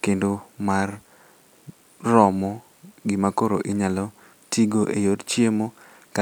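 No technical faults turn up anywhere in the recording of speech. There is nothing here to place on a timeline.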